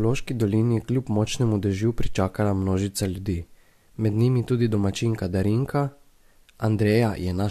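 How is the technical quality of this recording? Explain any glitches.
No technical faults are audible.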